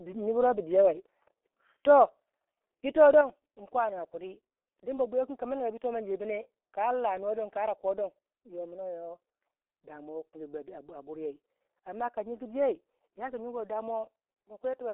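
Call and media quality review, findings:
G.723.1 codec, throughout: speech muffled and hoarse, consonants smeared, band limited to 300 Hz to 3.4 kHz. Heavy low-rate coding in 30 ms frames with a slowly updated voice model, consistent with a bitrate around 6.3 kbit/s.

Microphone volume stepped down, 3.21 s: speech and background both drop abruptly by about 6 dB in a single step, no ramp. Likely the call software's input-gain control lowering the microphone device volume after judging the level too hot.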